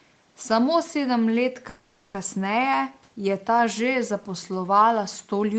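At 1.69 s the stream stalls for about 0.45 s, until 2.16 s, in what sounds like a call audio freeze, most likely packets held up in transit so the jitter buffer ran dry. The receiver bridges the wait by stretching the last sound into a fading buzz or hiss rather than dropping to silence. When delivery resumes the speech carries on from exactly where it stopped, so nothing is lost, but everything after arrives 450 ms later.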